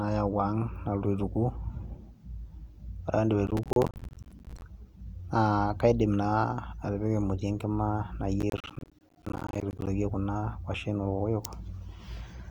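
Processor overload crackle runs from 3.47 to 4.62 s and again from 8.40 to 9.87 s in this speech clip. In each stretch the processor fails to deliver its audio buffers on time, around fifty of them. Each missed buffer, roughly 10 ms long, drops out to silence with hard edges, so the speech is chopped into a rapid, gritty crackle that stops once the load clears.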